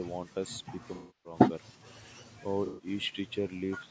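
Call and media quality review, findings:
Rough, grainy speech throughout, with noise filling gaps between harmonics and a thin, synthetic-sounding top band. Likely low-delay AAC compression (AAC-ELD): short frames resolve pitch poorly, and the grain fits a bitrate around 32 kbps. Content stops near 8 kHz, consistent with call microphone processing.

AAC frame loss with concealment at 0.95–1.37 s and 2.66–2.86 s. The decoder replays the last good spectrum. The first gap is about 300 ms, long enough to decay toward silence and fade back. The second, about 120 ms, leaves a smeared, noisy patch.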